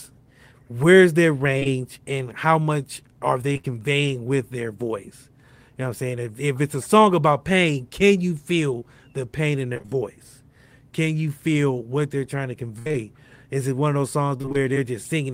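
Around 1.59 to 1.67 s, just before "and how much are", there is a quick double smear. This is short concealed packet loss: two back-to-back holes of about 20 ms each were filled by extending the preceding sound, then blended back into the real signal.

From 3.53 to 3.66 s the sound turns choppy, with pieces missing. The same robotic stutter returns from 9.74 to 9.93 s, after "feel the pain in", and from 12.79 to 12.96 s, after "what they're trying to", where one hole stretches to about 65 ms. It returns once more from 14.38 to 14.56 s. This is repeated packet loss: audio kept arriving late or not at all, and each brief gap was patched from the last sound before the next gap followed. Roughly half to nearly two thirds of each stretch is synthesised fill.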